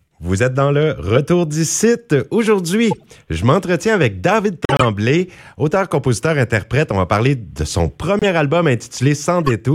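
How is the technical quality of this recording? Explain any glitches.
The recording has four audible glitches, all from a corrupt frame decoded. Flipped bits in the compressed stream were decoded anyway, so misread gains and codes put energy at the wrong frequencies for several frames at a time. This happens at 2.91–3.05 s, just before "je m'entretiens avec"; at 4.64–4.84 s, the loudest; at 8.19–8.23 s, right after "va parler de son", spanning only a couple of frames; and at 9.43–9.52 s. Each one is heard as a chirp or noisy blip cutting across the speech.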